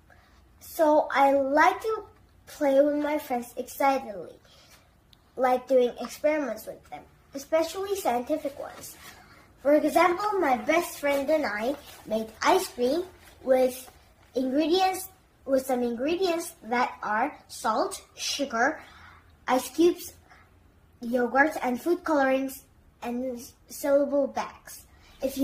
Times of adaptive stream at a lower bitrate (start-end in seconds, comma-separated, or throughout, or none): 9.78-21.78